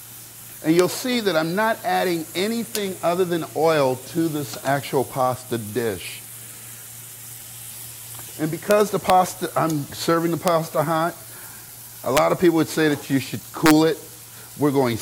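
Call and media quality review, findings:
Integer overflow. Sharp cracks at 0.79, 8.71, 9.10, 10.48 and 12.17 s, plus a longer burst 13.66–13.71 s. Peaks barely over full scale, about 0 to 1 dB. Gain or mixing stage wraps to opposite sign instead of saturating.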